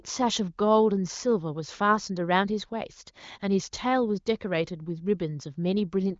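Speech carried over a wideband HD Voice-style channel with nothing above about 7.4 kHz, and nothing is technically wrong with it.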